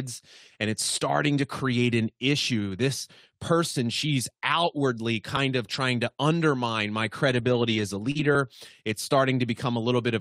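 Speech with brief rough, noisy patches at 1.39 to 1.45 s, at 5.73 s just before "to undermine my", at 7.29 to 7.79 s, and at 8.15 to 8.25 s after "as a". These are lost packets rebuilt from error correction: each dropped packet was replaced by a low-bitrate copy carried in the next one, so nothing goes silent, but about 40, 20, 260 and 60 ms sound coarser. At 8.11 to 8.17 s, also after "as a", a short smear marks a short concealed packet loss, where the receiver extended the preceding sound to cover about 40 ms that never arrived, then blended back into the real signal.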